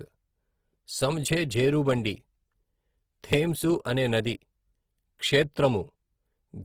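Across the whole speech clip, consonants and vowels turn rough and grainy, with band energy kept but filled by noise, so sibilants hiss coarsely rather than swirl as MP3 would. This is likely Opus compression in its music mode, fitting about 16 kbps, with content still reaching 20.4 kHz.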